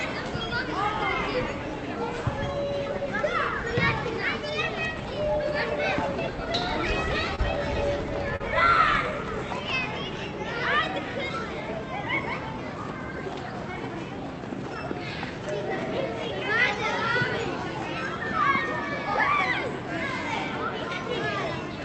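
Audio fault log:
7.35–7.40 s, short stall from a late packet: A packet arrived about 25 ms late and the jitter buffer ran dry, so the receiver held the last sound for 25 ms until it came in, then resumed at the same point. Nothing is lost, but the sound at that moment is stretched slightly, with a faint buzz or dip where the held audio repeats. Playback then runs 25 ms further behind.
7.38–7.40 s and 8.40–8.42 s, lost packet rebuilt from error correction: Each time, one packet was lost and rebuilt for 20 ms from the low-bitrate copy that Opus in-band forward error correction carries in the following packet. There is no gap, but those frames sound rougher and noisier than the 64 kbps audio around them, because the copy was coded far more coarsely. The first rebuilt frame falls at the end of the stall, and the second at the end of the concealed loss.
8.36–8.42 s, short concealed packet loss: About 40 ms of audio never reached the decoder in time, and the receiver filled roughly 37 ms of it by extending the last sound, following its pitch where it was tonal and using shaped noise where it was not, then blending back into the real signal. 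The result is a brief smear or wobble, and a short transient there may disappear. The call path's Opus coding at 64 kbps also cuts everything above 8 kHz, so the patch has the same dull top as the rest of the clip.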